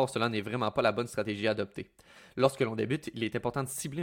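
Speech, with no technical fault audible anywhere in the recording. There is nothing to place at a time and no cause to explain.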